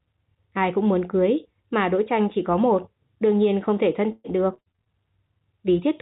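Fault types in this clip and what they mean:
Repeated packet loss (robotic sound): From 4.12 to 4.88 s, six gaps come in quick succession, and each is patched by stretching the preceding sound, so roughly a third of that span (about 275 ms) is synthetic fill, the longest gap 122 ms. This produces a choppy texture with pieces missing. A single dropout leaves one clean hole and recovery, but here the holes keep recurring before the sound settles, heard through narrowband 4 kHz telephone-style audio.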